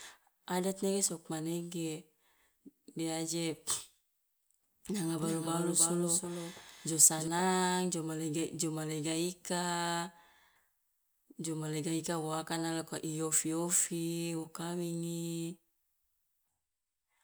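Speech with a doubled audio track from 5.18 to 7.28 s: an undecayed, uncoloured copy trails by roughly 300 ms, a few dB quieter, cutting in and out abruptly unlike an echo, likely from a slower second capture path.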